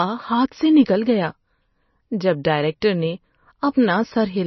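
From start to finish the speech is dull and watery, with nothing above 5.9 kHz and a swirly shimmer as weak frequency lines drop in and out, likely from heavy MP3 compression, fitting roughly 25 kbps. A plain low-pass filter would sound dull but steady, without this swirl.

At 2.44 s and again at 2.81 s there is pre-echo. A brief hiss arrives just ahead of a sharp attack, lasting about 10 ms and 16 ms. The codec spread its noise across the block before the onset, so the attack sounds softened. Unlike a click or dropout, this hiss leads into the attack rather than interrupting the sound.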